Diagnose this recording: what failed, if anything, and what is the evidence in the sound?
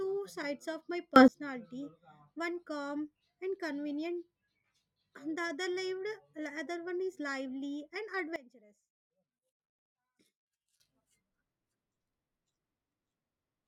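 Sudden gain jumps occur twice in this speech recording. At 1.16 s, just after "sides of my", the level steps up by about 22 dB for roughly 0.12 s, to 1.28 s. At 8.36 s, after "one is lively and", it drops by about 19 dB until 10.8 s. Speech and background noise shift together, and each change is instant. On the waveform the envelope steps abruptly, and on the spectrogram every frequency brightens or dims in a vertical band. The likely cause is a digital gain setting applied without a ramp.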